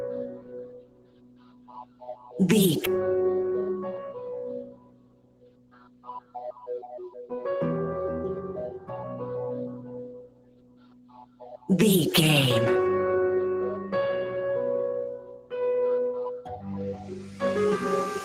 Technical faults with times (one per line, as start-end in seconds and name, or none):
0.00-18.25 noise suppressor applied to music or sounds
0.27-2.31 sound cut by the noise suppressor
2.85-2.87 skip ahead
2.95-3.83 jitter buffer speed-up
4.62-6.35 sound cut by the noise suppressor
9.76-11.69 sound cut by the noise suppressor
15.18-15.53 sound cut by the noise suppressor
16.38-16.66 sound cut by the noise suppressor